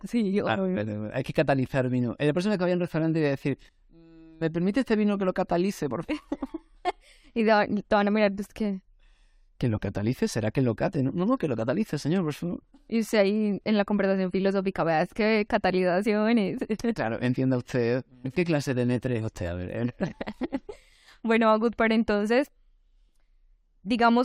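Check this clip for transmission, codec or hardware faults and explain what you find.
Nothing in the speech points to a fault of any kind. There are no events to report or to place on the timeline.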